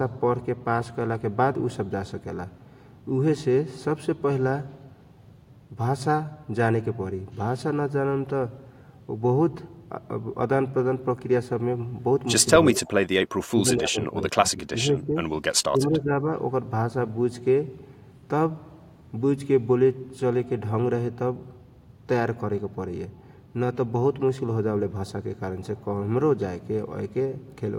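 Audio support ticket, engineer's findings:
Speech suppressed in double talk, 12.74–15.17 s and 15.41–16.15 s. Echo canceller likely attenuating both sides during overlap. Speech drops in pieces, about 20 dB then about 15 dB.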